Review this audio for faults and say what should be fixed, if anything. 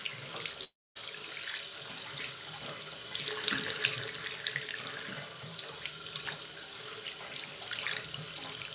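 At 0.64 s the sound breaks off and only resumes at about 0.97 s, likely a long network dropout. The receiver stretches the last sound into a fading buzz, then leaves about 250 ms of near silence, and the missing third of a second never returns. A waveform shows a tapering tail then a flat line; a spectrogram shows smeared, decaying bands then an empty column, all below a 4 kHz ceiling that fits a G.711-style call codec. A deeper jitter buffer plus redundant or retransmitted packets would prevent this.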